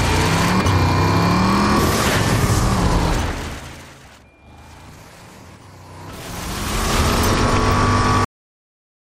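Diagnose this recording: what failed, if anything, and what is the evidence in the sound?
The recording has a cut-off end. At 8.25 s the audio stops dead in the middle of a sound and drops straight to digital silence for the rest of the clip, with no decay at all. That points to the driver or buffer stage, or the final write to storage: the last buffers never made it to disk or out to playback.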